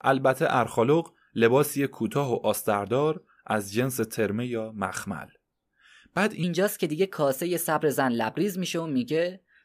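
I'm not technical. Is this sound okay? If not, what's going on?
No. From 6.43 s to the end, the speech suddenly sounds hurried and about three semitones higher. This is a section at the wrong speed, likely played back about 1.16 times too fast.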